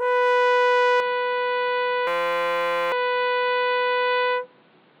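At 1.0 s the music abruptly turns dull and boxy with no gap, likely an input switched to a poorer device. It drops a few decibels and gains a faint new noise floor. A spectrogram shows everything above 4.7 kHz cut off from there onward.

From 2.07 s to 2.92 s a system hang loop replaces the music with a steady buzz near 172 Hz. A single 5.8 ms slice repeats about 146 times, which fits a 256-sample buffer. The waveform shows an identical tiling, and a spectrogram shows harmonic stripes.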